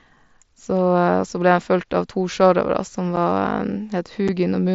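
At 3.16 s and 4.28 s, unconcealed Bluetooth headset packet loss drops one 7.5 ms voice packet, replaced by silence or an idle pattern. Each gap has abrupt edges: a notch in the waveform, a thin vertical gap across the mSBC band up to 8 kHz.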